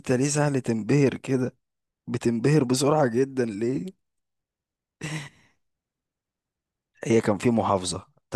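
No technical faults are audible.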